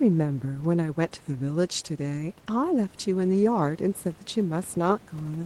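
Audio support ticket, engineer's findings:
No fault found in the audio path.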